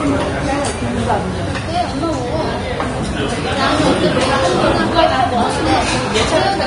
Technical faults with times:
0.00-6.67 Vorbis compression

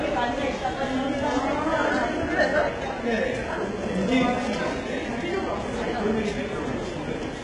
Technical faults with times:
0.00-7.44 HE-AAC compression

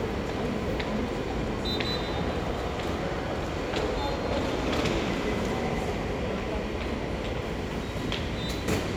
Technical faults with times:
0.00-8.96 USB whine

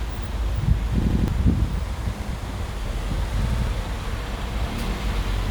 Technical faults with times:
1.02-1.28 repeated buffer
2.22-2.30 repeated buffer
3.50-3.67 repeated buffer

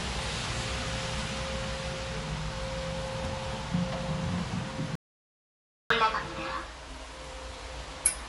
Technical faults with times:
0.00-8.29 MP3 compression
4.95-5.90 audio dropout to silence

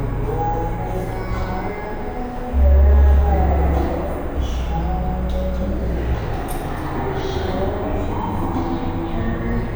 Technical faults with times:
0.00-9.76 stereo read as mono

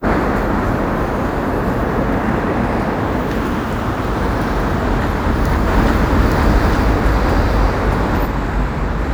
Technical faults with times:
5.68-8.26 doubled audio track

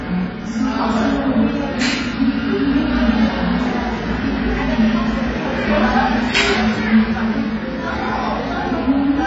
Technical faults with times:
0.00-9.27 AAC compression

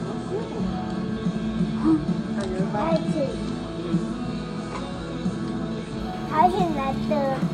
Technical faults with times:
0.00-6.00 adaptive stream starting at a low bitrate

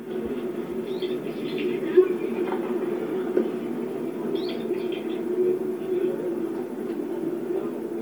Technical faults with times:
0.00-8.01 Bluetooth LC3 compression

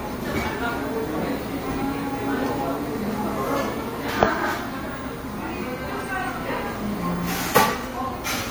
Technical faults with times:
none

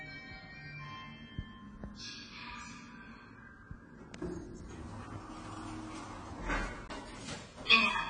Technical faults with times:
0.00-8.10 AAC compression

